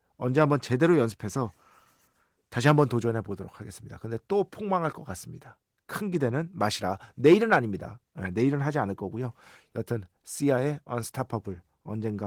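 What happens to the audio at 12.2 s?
At 12.2 s the speech carries on intact, with no dropout, click or other fault, only the light, even coding of the Opus voice compression heard throughout.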